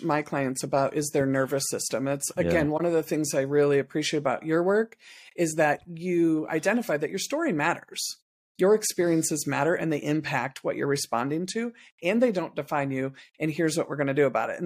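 At 2.77–2.81 s, after "again yeah", the decoder concealed a corrupt frame by muting or substituting it.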